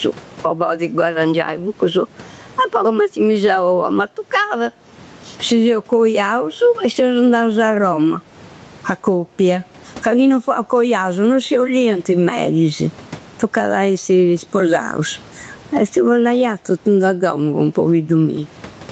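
Speech, with gain pumping throughout. The gain swings by around 20 dB. Loud and soft parts sound squashed together. The likely cause is gain set far too high, with a fast limiter pulling it down.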